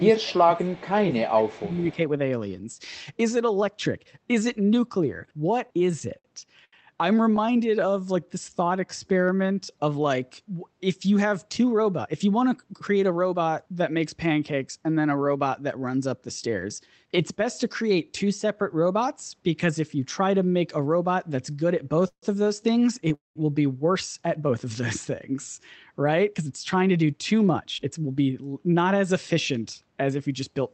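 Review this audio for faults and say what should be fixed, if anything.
Speech suppressed in double talk, 0 to 1.99 s: the voice dips by up to roughly 20 dB. The likely cause is the echo canceller turning down the near talker while the other side speaks. Unlike packet loss, the dips follow the other talker. Better double-talk detection in the canceller would prevent it.

Echo leak at 0.57 to 0.83 s, 1.28 to 1.32 s and 1.51 to 1.95 s: a faint copy about 30 to 35 dB down arrives 224 ms late, likely loudspeaker echo the canceller missed. The fixed delay tells it apart from room reverb. Stronger residual echo suppression would remove it.

Repeated stalls (stutter), 5.67 to 7.99 s and 22.0 to 23.12 s: the jitter buffer ran empty ten times and then four times, with gaps of up to 81 ms and 146 ms, each filled by extending the last sound. Nothing is lost, but the halting rhythm sets it apart from a smooth slow-down. 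A deeper jitter buffer would prevent it.

Jitter buffer slow-down, 7.46 to 9.73 s: repeated pitch periods add 263 ms, so the audio plays at 89% speed with the pitch unchanged. The stretching is even rather than halting. Raising the buffer target earlier and more gently would avoid it.

Jitter buffer speed-up, 11.57 to 13.42 s at 113% speed, about 200 ms removed, and 25.83 to 28.39 s at 112%, about 300 ms removed: the receiver cut pitch periods to reduce excess delay, so the audio sounds hurried at the same pitch. Steadier packet delivery would prevent it.

Call audio freeze, 23.14 to 23.38 s: a single 213 ms hold, 170 ms of it silent, likely caused by packets held up in transit. It is one long gap rather than the repeated short breaks of a stutter. Fixing the network path would prevent it.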